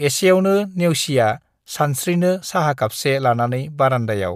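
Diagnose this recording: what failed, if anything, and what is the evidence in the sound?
Nothing failed in this recording.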